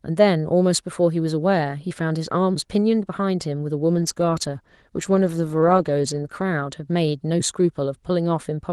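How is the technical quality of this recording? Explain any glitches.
The speech has come over a call link whose codec tops out around 12 kHz, and there's one real glitch: a call bitrate drop from 3.93 to 7.51 s. The connection's bandwidth estimate fell, so the encoder had to squeeze the speech into far fewer bits. That fits a slide from 32 kbps down to about 15 kbps, sitting at the bottom for 2.26 s. Coarser coding and a narrower top end make the speech sound rough and muffled until it recovers.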